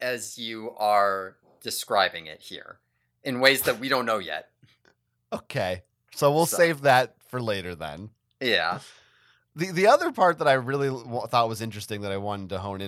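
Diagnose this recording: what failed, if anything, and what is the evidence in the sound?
Nothing seems to have gone wrong anywhere along the chain, as far as I can hear, with no audible problem at any point in this speech recording.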